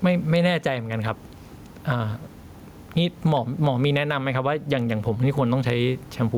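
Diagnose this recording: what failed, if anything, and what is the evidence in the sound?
Gain pumping at the input: the gain swings about ten dB with loud speech, likely excess gain slamming a fast limiter.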